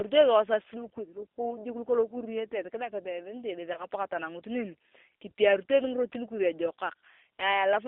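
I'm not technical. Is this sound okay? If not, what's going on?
No. Throughout, the speech sounds thin, slightly rough and robotic, like an internet phone call. That's the G.729 codec, which rebuilds the voice from a simplified model and discards everything above about 4 kHz; the phone line itself trims it further, to about 3.6 kHz.

From 3.73 to 3.86 s the voice briefly gets smeared out and fades. This is VoIP packet loss concealed by the speech codec: one chunk of audio went missing, and the decoder patched the gap by stretching the preceding sound.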